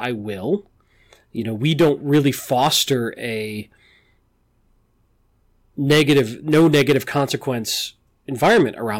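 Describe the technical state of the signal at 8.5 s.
At 8.5 s the speech is in a burst of hard clipping running from about 8.43 to 8.62 s. The signal arrives at roughly 9 dB above what the stage can pass, so every peak is sheared off flat at the ceiling. Those squared tops generate strong high-order harmonics, heard as harsh distortion on the loud sounds.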